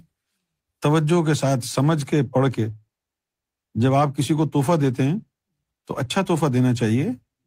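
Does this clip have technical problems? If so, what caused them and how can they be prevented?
No, there are no audible technical faults in this speech recording, so nothing needs preventing.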